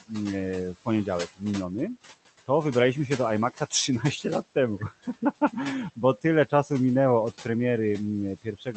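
Throughout the clip, noise suppressor artifacts pump the room noise down by about 14 dB between phrases and let it back under the speech. From 8.42 to 8.76 s, speech cut by the noise suppressor swallows roughly 150 ms of the speech at the end of the clip, dropping it by up to about 17 dB. This is gain riding on speech, not a dropout or a codec gap, which would leave silence or a glitch.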